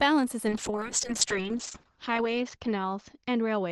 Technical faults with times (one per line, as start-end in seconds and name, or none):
0.49-3.71 call bitrate drop